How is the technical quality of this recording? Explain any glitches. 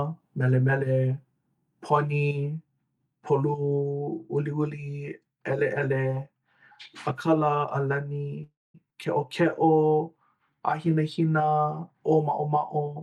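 The recording has three network-related glitches packed into about three seconds of the speech, all between 8.4 and 11.0 s.

From 8.43 to 8.77 s there is a call audio freeze. The last sound is carried on as a buzz or hiss that fades, then goes silent for about 200 ms, before the speech resumes where it left off. Packets were likely delayed and the jitter buffer ran dry, so roughly 0.31 s of filler was inserted with nothing lost. On a spectrogram this shows as smeared, decaying bands followed by a blank column. The waveform shows a tapering tail and then a flat line.

At 8.90 to 8.94 s the audio makes a skip ahead. Around 150 ms of speech is gone and the two sides are joined by only a brief 10 ms fill, so the sound jumps abruptly. This happens when a stretch is discarded, on the network or by an overfull jitter buffer, while later audio is already queued. The waveform shows an abrupt discontinuity in envelope and phase. 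The spectrogram shows a hard vertical seam where formant tracks break off and restart elsewhere.

From 9.42 to 11.03 s a jitter buffer slow-down stretches the speech to about 92% speed, adding 145 ms. The receiver repeated single pitch periods and pause fragments to rebuild its reserve. The pitch stays the same, but sounds are drawn out. On a spectrogram the harmonics keep their spacing while segments lengthen, sometimes with faint periodic ripples. The waveform shows runs of near-identical repeated cycles.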